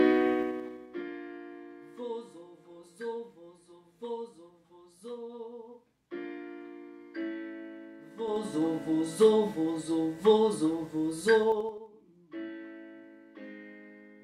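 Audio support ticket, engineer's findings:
Ticking, zipper-like texture riding on level moves at 0.34–1.02 s (drop of roughly 20 dB), 8.11–8.62 s (rise of roughly 20 dB) and 11.44–11.86 s (drop of roughly 25 dB). Zipper noise: gain stage applying changes in unsmoothed steps of about 3 dB (about 5 dB in the last event), around ten per second, each step a small click. Probable fix: per-sample gain ramping.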